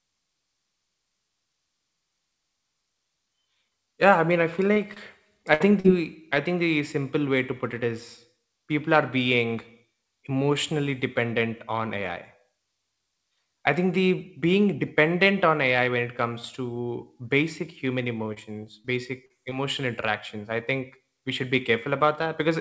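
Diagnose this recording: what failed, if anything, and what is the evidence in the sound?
Network stage, short concealed packet loss: brief smears or wobbles at 4.74, 4.94, 5.80 (just before "i think"), 18.34 (after "comes to basic human"), 18.82, 19.26 and 19.50 s (before "interactions I think we"). Each event loses 20 to 40 ms of audio. The decoder filled the hole by extending the previous sound and then blending back into the real audio.

Network stage, burst of packet loss: from 5.54 to 5.62 s about 60 ms of audio never arrived. The receiver held the last sound and let it fade, then resumed later in the audio. The concealed segment replaces the missing portion, over a call path whose content stops at 8 kHz.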